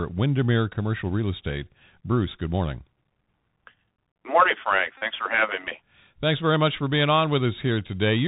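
This speech recording sounds narrow and boxy throughout, with nothing above about 4 kHz, s sounds that come out scratchy, loud bright moments that smear into distortion, and a fine granular hiss under the voice. That is the Bluetooth CVSD headset codec, which codes the audio one bit per sample as a simple up-or-down step whose size adapts. When the signal moves faster than the step can follow, it distorts, and the damage here is plainly audible, consistent with a 64 kbps headset link. From 4.98 to 5.03 s, just before "for having me", a short steady buzz pitched near 267 Hz replaces the sound. This is a Bluetooth headset packet repeated: packets were lost on the radio link and the chip kept decoding the last good packet's bits every 3.75 ms. About 37.5 ms went missing, which points to roughly ten repeated packets before normal audio returned.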